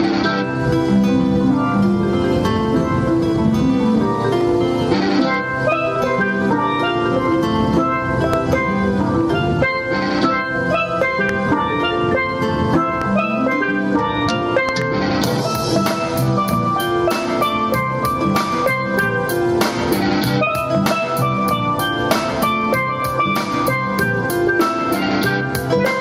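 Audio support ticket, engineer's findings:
Hard clipping throughout: peaks cut flat, crackle on loud passages. Gain stage or converter overdriven by about 12 dB, with under 1% of samples clipped.

Loud pop: sharp pops at 8.34–8.36, 11.29–11.31 and 13.02–13.04 s, plus a double pop at 14.69–14.84 s, peaking roughly 15–20 dB above the sound. Likely a connector, switch or static transient.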